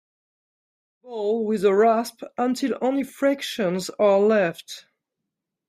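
Speech clip, no technical faults.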